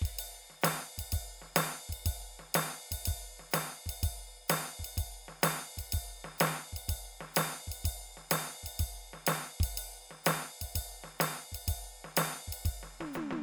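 The music comes through with no audible dropouts, distortion or other technical faults anywhere in the recording.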